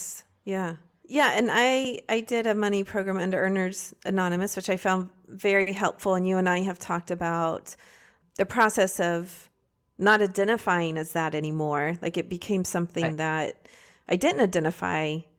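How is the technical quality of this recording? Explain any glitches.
Two network-timing glitches affect the speech in this recording.

From 5.61 to 5.68 s there is a short stall from a late packet. A packet missed its playout time and the jitter buffer ran dry, so the receiver held the last sound for about 50 ms until the packet arrived. No speech is lost, but one sound drags briefly, with a slight buzz or dip, and everything after it plays about 50 ms later.

From 10.45 to 11.42 s there is a jitter buffer speed-up. The buffer had built up more audio than it targets, so the receiver repeatedly cut out pitch-period-sized slices, about 70 ms in total. Speech runs at about 106% speed with unchanged pitch and sounds hurried.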